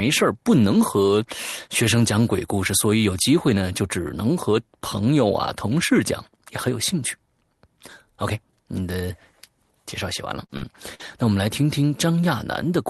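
Around 10.45 to 10.66 s there's a short concealed packet loss: about 40 ms of the Opus stream (32 kbps, audio up to 12 kHz) never arrived, so the receiver stretched the preceding sound to cover it, leaving a brief smear and adding a few milliseconds of extra time. Inside that stretch, 10.49 to 10.51 s is a lost packet rebuilt from error correction, a 20 ms frame played from the low-bitrate copy carried in the next packet, so it comes out rougher and noisier. A second short concealed loss sits at 10.57 to 10.65 s, again 40 ms gone and bridged with about 44 ms of continued sound, with another 20 ms rebuilt frame at 10.62 to 10.64 s. Then at 10.94 to 11.02 s comes a burst of packet loss: the missing 40 ms is filled by the previous sound continuing and fading down over about 50 ms before the audio picks up further along. That burst also contains a gritty 20 ms rebuilt frame at 10.99 to 11.01 s.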